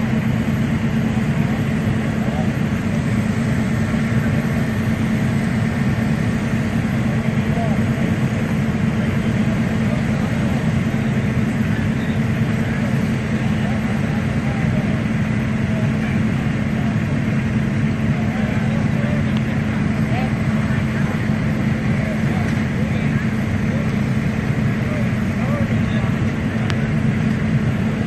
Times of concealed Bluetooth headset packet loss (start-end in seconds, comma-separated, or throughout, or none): none